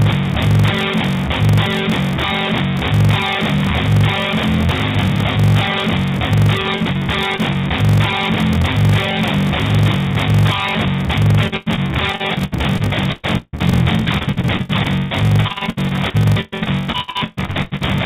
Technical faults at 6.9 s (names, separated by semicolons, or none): block size mismatch (padded); repeated packet loss (robotic sound)